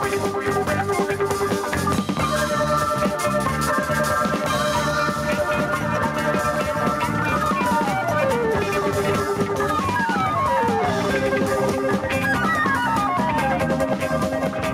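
Throughout the clip the gain swings by about 5 dB, leaving the audio squashed and breathing. This is gain pumping, likely from input gain set far too high with a fast limiter clamping every peak.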